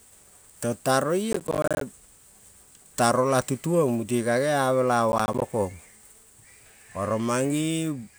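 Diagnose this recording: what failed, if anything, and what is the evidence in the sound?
Processor overload crackle at the driver/buffer stage, 1.32–1.81 s and 5.12–5.53 s after "gea mela": missed buffers leave runs of silent 10 ms gaps, gritty bursts rather than single dropouts.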